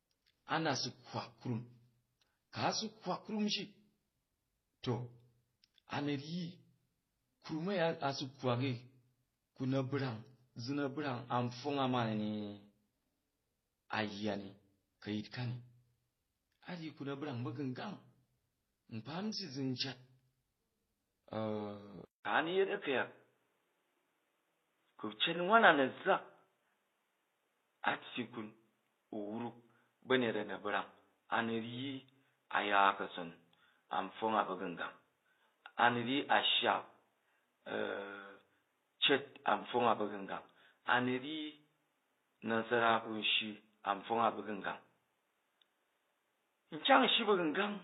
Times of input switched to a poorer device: 22.05-47.83

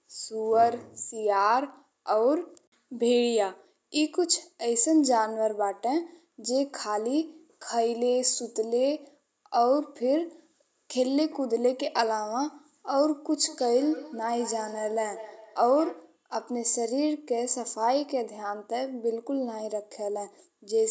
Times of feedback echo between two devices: 13.32-16.20

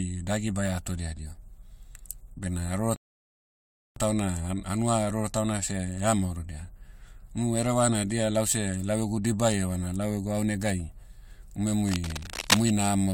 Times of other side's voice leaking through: none

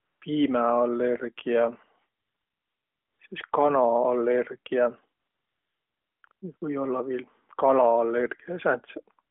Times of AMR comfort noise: 0.00-0.22, 2.20-3.30, 5.20-6.62

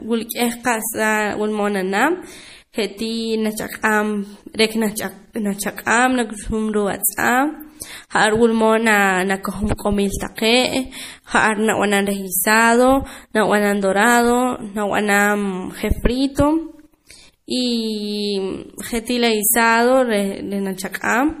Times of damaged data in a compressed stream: none

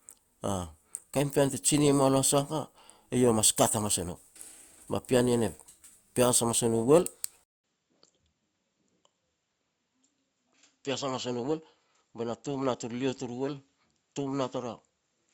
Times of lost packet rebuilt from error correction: none

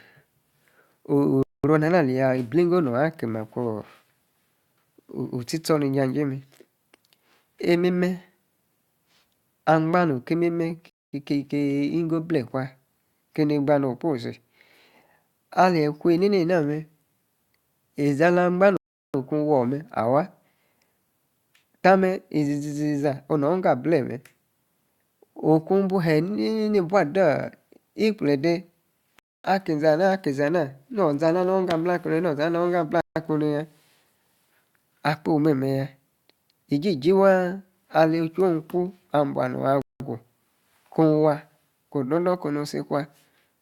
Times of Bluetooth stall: 1.43-1.64, 10.90-11.13, 18.77-19.14, 29.19-29.45, 33.01-33.16, 39.82-40.00

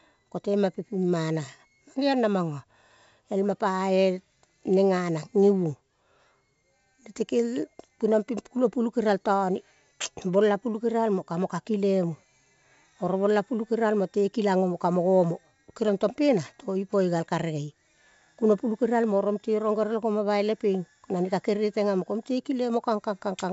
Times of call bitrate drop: none

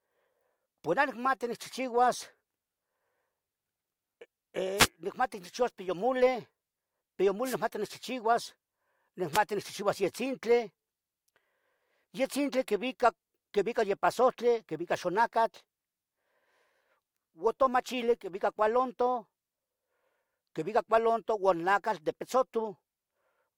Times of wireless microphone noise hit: 4.76-4.88, 7.44-7.56, 9.33-9.38

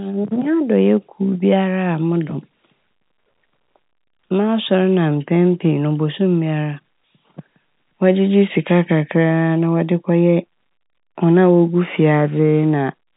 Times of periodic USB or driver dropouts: none

